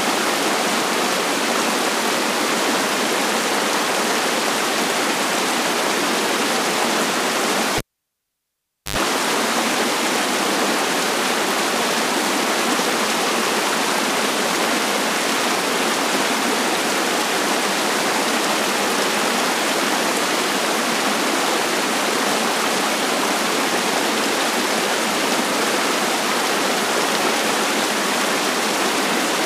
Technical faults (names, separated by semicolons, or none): cable pulled and plugged in